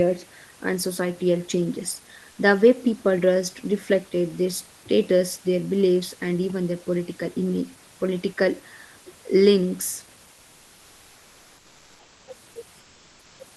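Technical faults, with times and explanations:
12.79–13.39 s, comfort noise in place of the background: the sender likely stopped transmitting in a pause, so the receiver filled 0.6 s with synthetic noise. The room's textured background, about 34 dB below the speech peaks, turns into a flat, featureless hiss about 2 dB quieter.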